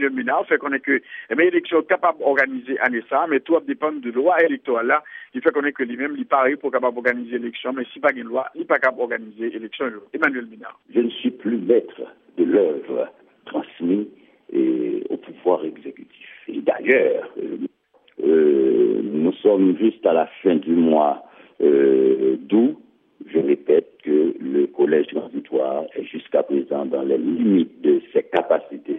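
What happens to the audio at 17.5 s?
Nothing goes wrong at 17.5 s; the audio runs through that moment intact, with no dropout, click or other fault.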